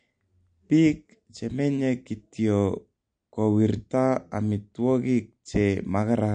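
Throughout the speech, the treble stops dead at about 9.4 kHz, and sibilants sound watery and chirpy, which points to roughly 48 kbps and likely MP3 compression. On a spectrogram, a flat ceiling appears, with high-frequency patches flickering on and off between frames.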